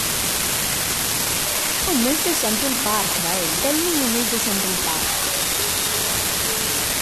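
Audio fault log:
throughout, unreliable data bit: a marginal data line flips one bit in a random share of samples, adding same-sized spikes that form a steady crackle or fizz. Unlike clipping crackle, it doesn't follow loud speech, and it carries on unchanged through pauses.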